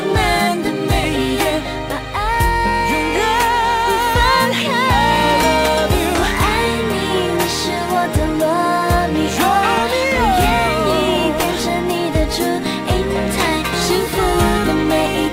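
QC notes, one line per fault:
Throughout, crude rate conversion: samples repeated or skipped without filtering, consistent with 44.1 kHz to 48 kHz, leave gritty inharmonic fizz roughly 25 dB down; spectrogram shows stray mirrored lines, waveform tiny steps.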